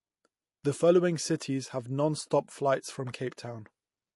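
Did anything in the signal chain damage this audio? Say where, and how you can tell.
Yes, at the codec stage, likely MP3 compression: throughout, nothing survives above 11.3 kHz, and dropped spectral lines leave a watery swirl, consistent with roughly 48 kbps.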